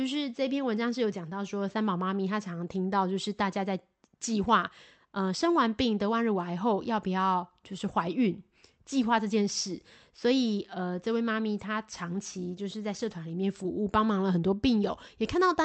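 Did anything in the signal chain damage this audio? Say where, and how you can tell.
No, nothing in the signal chain damaged this speech.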